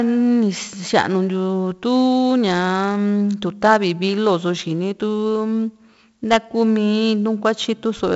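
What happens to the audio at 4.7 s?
At 4.7 s, as throughout, the speech passes through 4-bit ADPCM compression. Each sample is a coarse 4-bit step from a prediction, so heavy gritty hiss rides every loud syllable and attacks distort. The sound is dull, with nothing above 7.7 kHz.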